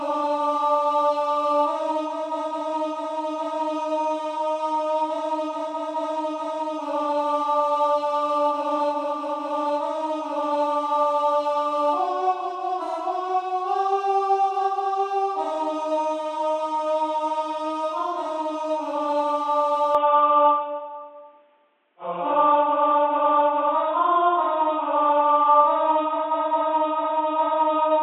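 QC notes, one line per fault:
19.95–28.02 s: input switched to a poorer device. Sound turns dull with no gap, nothing above 3.8 kHz, level shifts about 5 dB. Likely a narrower-band microphone took over.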